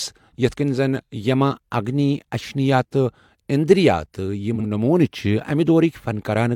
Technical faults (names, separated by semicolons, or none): frames out of order